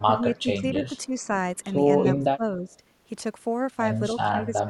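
An echo canceller, likely confused by double talk, mistakes the talker for loudspeaker echo and turns the speech down. This speech suppressed in double talk dips it about 10 dB at 0.14–0.23 s and 0.4–1.31 s, about 20 dB at 2.17–2.77 s, and about 15 dB from 4.22 s to the end.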